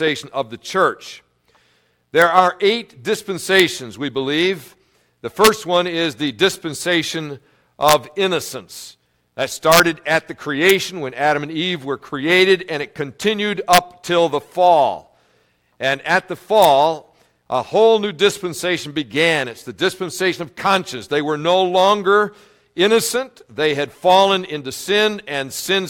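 Integer overflow at 2.22, 3.60, 5.45–5.47, 7.89–7.93, 9.72–9.80, 10.70, 13.73–13.78 and 16.63–16.65 s: peaks pushing only about 1 dB past full scale wrap to the opposite sign, producing violent cracks.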